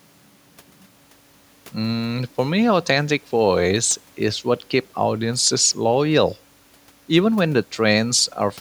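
Speech recording with no technical faults. There is nothing here that needs a time or a cause.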